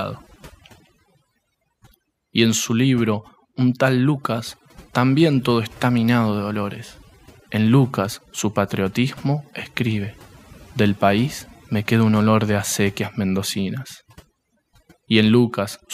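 A speech recording with overdone noise removal running through the whole thing. The reduction was pushed so hard that the pauses drop to near silence dotted with little twinkling specks, and the quieter parts of the voice get stripped along with the noise.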